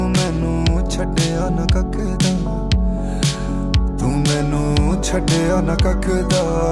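No technical faults are audible.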